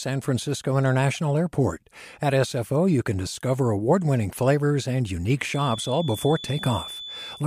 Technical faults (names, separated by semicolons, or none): feedback whistle